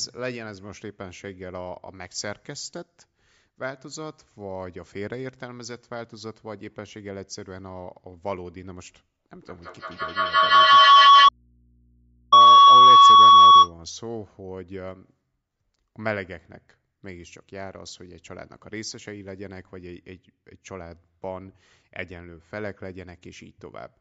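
From 9.33 to 13.76 s, a feedback howl builds as a room loop between microphone and loudspeaker gains level each pass, settling near 1 kHz, pulsing roughly every 150 ms and peaking about 21 dB above the speech. From 11.29 to 12.32 s, an audio dropout to a faint residue, likely the signal lost while the path stayed live, leaves about 1.03 s of mains hum far below normal level.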